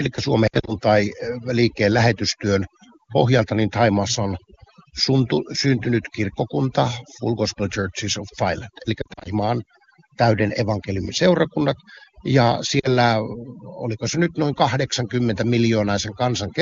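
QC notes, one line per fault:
throughout, overdone noise removal: the background drops and breaks up into twinkling specks. A noise reducer pushed too hard is switching off individual frequency bands whenever their level sits close to its noise estimate, and the quieter parts of the speech fall below that threshold along with the hiss, leaving gaps that shimmer in and out. The wideband coding underneath comes through clean.
0.47–0.73 s, 9.01–9.28 s, 12.79–12.88 s, lost AMR speech frames: the speech briefly warbles and dips, then recovers weak or rough for a moment. In the first burst about 120 ms goes missing across a 200 ms span, with the longest gap 60 ms. In the second about 140 ms is lost across 240 ms, with the longest gap 40 ms. The third loses 40 ms. At each gap the wideband decoder repeats its last good pitch and spectral settings while lowering the gain.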